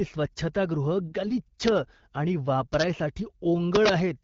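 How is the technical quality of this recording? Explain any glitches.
There's one real glitch in this speech clip, under the light coloring of AMR wideband (HD Voice) coding, which sounds like roughly the 12.65 kbit/s rate.

From 3.75 to 3.89 s there's integer overflow. Peaks about 3 dB over full scale wrap to the opposite sign instead of limiting, giving harsh, violent cracks far sharper than clipping.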